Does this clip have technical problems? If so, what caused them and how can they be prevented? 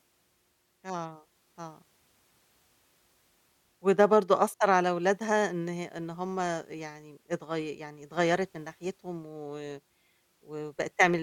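No, there are no technical problems to hear in this speech clip. Nothing in it calls for a fix or any change to how it was recorded or processed.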